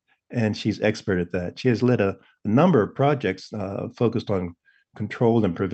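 The sender's audio clock is running about one and a half percent slower than the receiver's. This clock drift between sender and receiver runs through the whole speech clip, so the jitter buffer at the receiving end is fed a little too slowly and keeps drifting toward empty. The receiver has to stretch what it has to keep playback going. The result is a faint unsteadiness in timing, not any change in pitch or tone.

From 1.71 s to 5.53 s the receiver makes repeated timing corrections, each time duplicating a short slice of audio to cover the shortfall. The slices are unevenly spaced, and together they add roughly 70 ms. Playback in this stretch runs at about 98% of its natural pace. If heard at all, it comes across as small hiccups and a slightly dragging, uneven rhythm. The Opus call path, with its top end rolled off near 8 kHz, carries these repeats without smoothing them.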